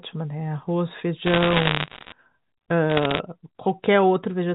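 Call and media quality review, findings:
Crackle bursts of sharp ticks over the speech, 1.26–2.12 s and 2.90–3.20 s. Bit errors on the digital phone line, G.711 mu-law path, error rate around one to two percent: each flipped high-order bit, or sign bit of a loud sample, corrupts one sample into a click.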